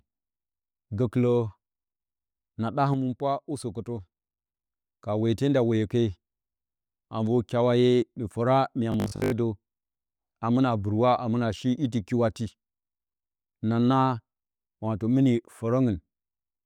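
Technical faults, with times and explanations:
2.94–4.64 s, sudden gain jump: sound and background noise drop together by about 6 dB with no ramp, likely a digital gain change applied between single samples.
8.92–9.32 s, robotic sound from repeated short buffers: a rigid metallic 50 Hz buzz, likely from one 20 ms chunk being repeated while most real audio is skipped.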